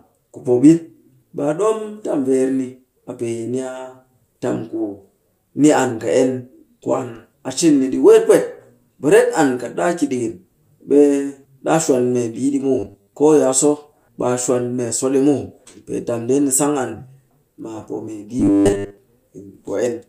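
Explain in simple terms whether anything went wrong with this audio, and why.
Robotic sound from repeated short buffers appears twice: from 12.79 to 13.13 s, just after "shwan membii ɗi muw", and again from 18.40 to 18.98 s. The speech turns into a stiff, metallic buzz at 100 Hz. The likely cause is new audio arriving too slowly, so the player keeps replaying the same tiny slice, which fits a 10 ms piece, for most of each stretch while the real speech is skipped.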